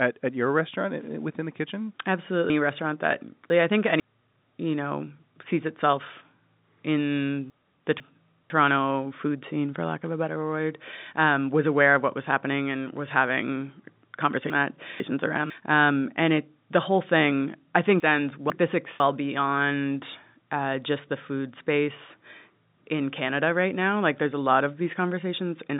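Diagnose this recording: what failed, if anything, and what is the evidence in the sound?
Chunks out of order, from the network or jitter buffer: half-second blocks play late at 2.5–4.0, 7.5–8.5, 14.5–15.5 and 18.0–19.0 s. Each sounds jumbled and shows as hard vertical seams on the spectrogram.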